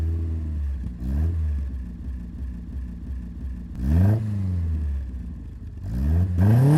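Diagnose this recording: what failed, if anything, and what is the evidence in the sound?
System hang loop in the driver or buffer: from 2.05 to 3.76 s a 341 ms chunk stutters five times at 2.9 Hz, fitting a 16384-sample ring buffer.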